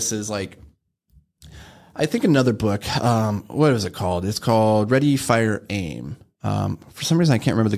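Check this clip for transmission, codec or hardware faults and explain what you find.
No transmission, codec or hardware faults are audible here.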